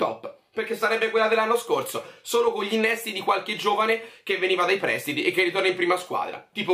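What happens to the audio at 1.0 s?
Nothing goes wrong at 1.0 s; the audio plays through that moment intact, with no audible fault.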